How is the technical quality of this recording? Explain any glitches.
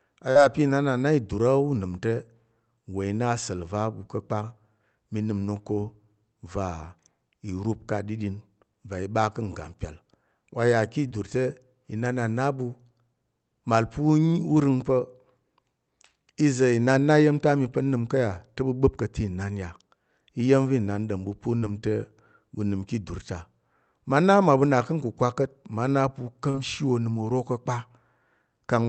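The recording has four short dropouts from concealed packet loss, at 0.31 to 0.38 s, 11.07 to 11.14 s (just before "te inan a"), 21.59 to 21.65 s, and 26.50 to 26.57 s. Each time, roughly 40 ms of audio failed to reach the decoder in time, and the receiver improvised about 33 to 39 ms of replacement by extending the preceding sound, pitched or noisy, before crossfading back. The result is a brief smear or wobble where a consonant can go missing. The call path's codec bandwidth stops at about 8 kHz, which fits an Opus link at around 32 kbps.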